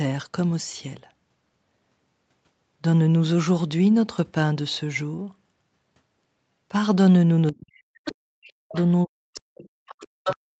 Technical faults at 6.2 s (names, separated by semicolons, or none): none